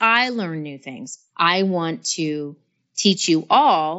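No technical faults can be heard in this speech recording.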